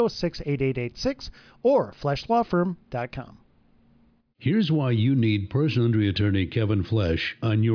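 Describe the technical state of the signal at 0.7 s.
At 0.7 s the speech signal is intact, with no audible fault at that point.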